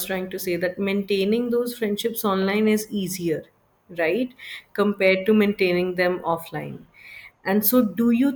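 No technical faults can be heard anywhere in the recording, and the signal stays steady and intact throughout.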